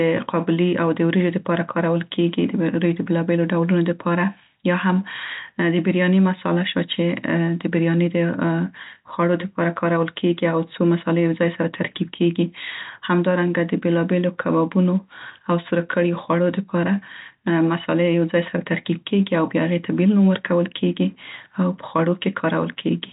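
No faults are heard in the speech, which carries the narrow band of G.711 telephone coding with nothing above 3.8 kHz.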